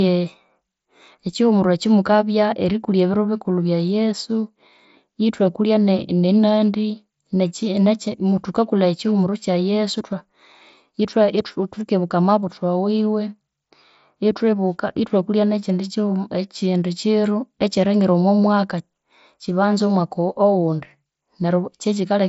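No technical faults are present: the speech comes over a Bluetooth mSBC headset link, so nothing is heard above about 7.7 kHz, and the codec leaves only a light grain on the louder passages.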